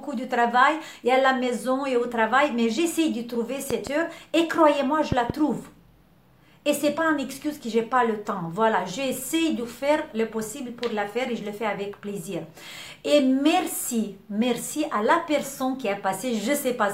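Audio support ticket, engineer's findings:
Loud pop, twice: 3.71–3.89 s and 5.12–5.32 s, each a double pop about 15 dB above programme, audio continuing underneath. Likely voltage transient at a plug, switch or static discharge, shaped by downstream stages into brief thumps.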